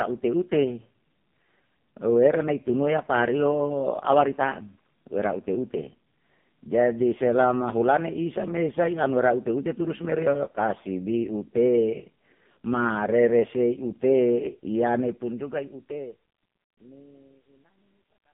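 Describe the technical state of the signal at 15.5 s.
At 15.5 s the speech sits inside truncation distortion on a fade, running from 14.99 s to the end at 18.34 s. As the smooth fade-out lowers the level, the volume stage rounds samples to a coarse grid with no dither, which fits an 11-bit word. The waveform collapses into square steps, adding a gritty, level-dependent grain that worsens from 16.58 s. Steady hiss would not follow the level like this.

Beneath that, the whole clip carries heavy AMR narrowband mobile codec damage, consistent with the low 5.15 kbps mode. Everything above 3.5 kHz is gone, the low end thins below about 150 Hz, and the vocal-tract model rebuilds the voice from sparse pulses, giving a buzzy, synthetic tone. That boxy, band-limited sound is fixed and unlike the grit that grows as the fade drops.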